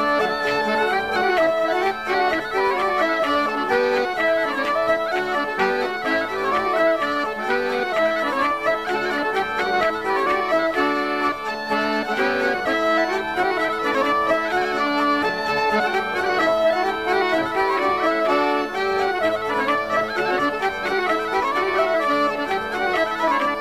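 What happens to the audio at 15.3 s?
Nothing goes wrong at 15.3 s: the audio plays through that moment intact, with no audible fault.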